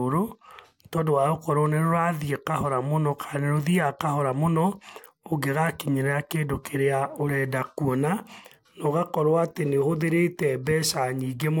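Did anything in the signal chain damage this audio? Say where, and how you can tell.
No, nothing in this speech stood out on listening as damage from any stage of the signal chain.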